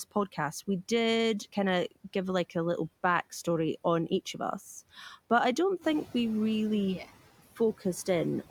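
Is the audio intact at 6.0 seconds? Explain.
No. Noise suppressor catching up runs from 5.81 to 6.05 s, between "us but i don't" and "we really yeah". The room noise jumps by about 10 dB there, and the suppressor's noise estimate lags. At first it removes only about 8 dB instead of about 16 dB, so the noise bursts through louder, then sinks as the estimate adapts over 240 ms.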